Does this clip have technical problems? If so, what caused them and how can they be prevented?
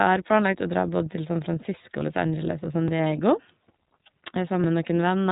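Yes. The speech is cut off at 3.8 kHz and has a rough, slightly synthetic texture throughout, which is plainly iLBC codec damage. The sound and its cut-off point to the 13.33 kbps, 30 ms-frame mode. The coarse excitation coding of each separate frame adds that grainy, buzzy edge, which a plain low-pass filter would not. Prevention: use a wideband codec or send the audio uncoded.

At 4.64 s the sound jumps forward, losing about 10 ms with no gap of silence. That rules out a dropout, which would leave a hole. The likely cause is a dropped buffer (overrun), where the recording software fell behind and the hardware overwrote samples it had not yet read. Prevention: use larger buffers and give the audio thread higher priority.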